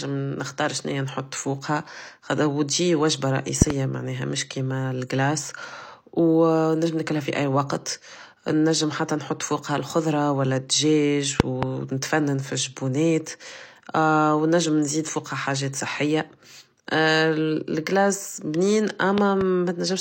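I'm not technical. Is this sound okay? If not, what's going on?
No. This speech has a fault called a loud pop, heard three times: from 3.6 to 3.7 s, from 11.4 to 11.6 s, and from 19.2 to 19.4 s. Each time there are two sharp pops in quick succession, much louder than the speech, which carries on underneath. The likely cause is a sudden electrical jolt, from a plug, a switch, static or a sound-driver glitch, getting into the recording.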